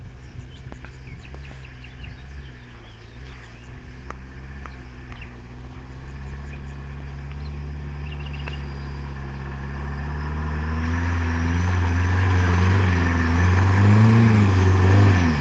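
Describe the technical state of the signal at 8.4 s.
At 8.4 s the signal is intact, with no audible fault at that moment.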